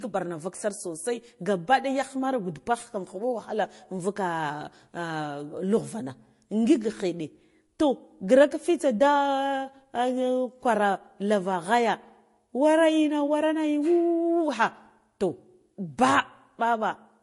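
Throughout, the speech carries two overlapping sets of compression artefacts below a hard ceiling near 11.3 kHz, unlike one codec's single texture, likely transcoding between lossy codecs at low bitrates, Vorbis then MP3.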